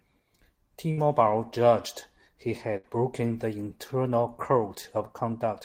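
Bursts of packet loss at 0.91 to 1.00 s and 2.77 to 2.87 s: each time, consecutive packets failed to arrive, so the receiver stretched the last sound for about 60 ms as a fading buzz or hiss, then resumed with roughly 60 ms of speech skipped.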